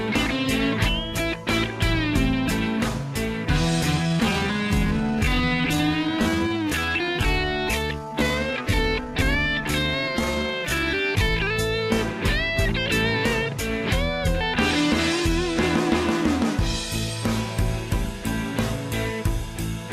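The audio has a time-stretched section from 3.99 s to 11.39 s. The pace suddenly drops to about 0.67 times normal speed while the pitch holds steady. The slowed passage drags. Software likely stretched it to fill a set length, repeating short pieces to keep pitch.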